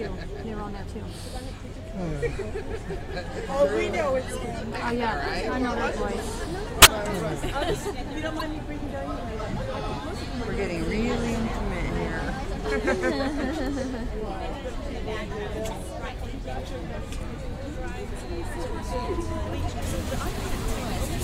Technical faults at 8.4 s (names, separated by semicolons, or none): corrupt frame decoded